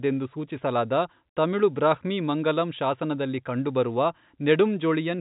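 Speech over telephone coding, with no technical faults.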